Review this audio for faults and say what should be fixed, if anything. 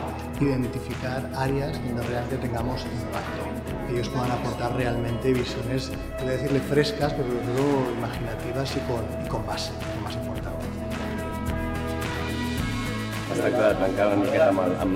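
Periodic clock jitter runs from 7.13 s to the end of the clip. Interference is shaking the converter's sampling clock at around 1 kHz. Every component of the sound picks up sidebands about 1 kHz above and below it, which adds a rough, metallic edge that grows stronger on higher-frequency content. To prevent it, give the converter a clean, well-isolated clock and keep interference off its clock and supply lines.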